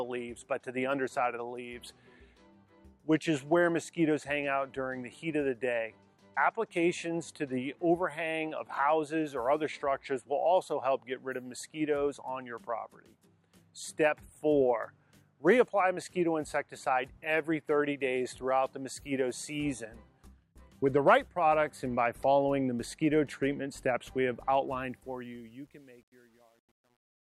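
Truncation distortion on a fade runs from 24.68 s to the end of the clip at 27.30 s, and it is worst from 25.31 s onward. The fade-out was computed at too low a precision and with no dither, which fits a stage keeping 10 bits. As the level sinks toward the smallest step, the waveform collapses into a few square steps, so the tail of the fade turns gritty instead of dying away smoothly.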